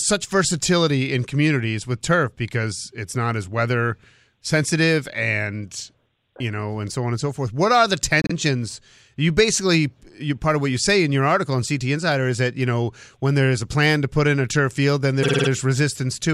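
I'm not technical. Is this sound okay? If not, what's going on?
No, not quite. This speech has two spots with repeated frames: a small chunk of audio, about 52 ms, gets played again right after itself, so it stutters. After "forth what are the", at 8.22 to 8.32 s, the chunk repeats twice, adding about 0.1 s. After "in a turf field", at 15.22 to 15.48 s, it repeats five times, adding about 0.26 s. This usually happens when a piece of the compressed file got written or sent more than once.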